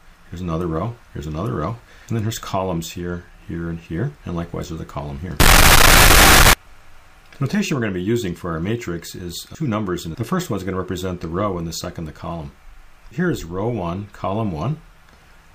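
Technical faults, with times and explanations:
5.40–6.53 s, float read as integer: for just over a second the audio jumps to a near-square waveform at an almost constant, very high level, and quiet background noise comes out as loud as the main sound, though its pitch can still be followed. This is likely 32-bit float samples read as 32-bit integers, so sign and exponent bits set each value. Ordinary clipping only flattens the loudest moments and leaves quiet passages quiet.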